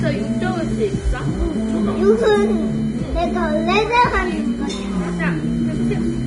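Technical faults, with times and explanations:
Throughout, Vorbis compression: nothing above 10.6 kHz, the treble has turned to grainy hiss and attacks are smeared, likely heavy Vorbis coding at a bitrate around 30 kbps.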